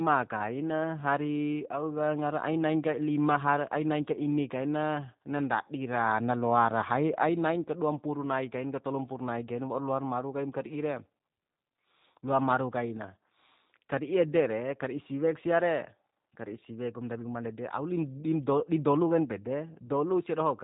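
G.729 codec damage runs through the whole speech clip: every 10 ms frame is rebuilt from a vocal tract filter, a pitch predictor and a few pulses, which fits an 8 kbit/s stream. Nothing passes above 3.8 kHz, and the speech sounds plainly rough and synthetic.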